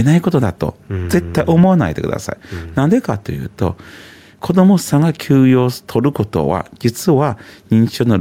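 The input gain is likely set far too high, with a fast limiter or compressor clamping down on every loud sound throughout the speech. The level swells in each pause and ducks under louder syllables by around 5 dB, leaving the level squashed and pumping.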